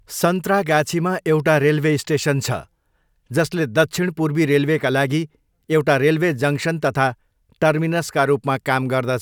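Nothing in the recording stood out as a technical problem on listening.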